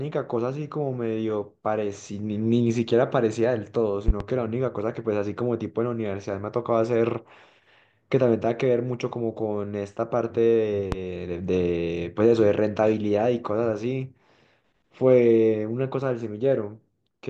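At 4.08 to 4.24 s, two loud pops strike in quick succession. A single loud pop follows at 10.92 to 10.96 s. Each jumps well above the speech, which continues underneath. A likely voltage spike from a plug, switch or static is causing them.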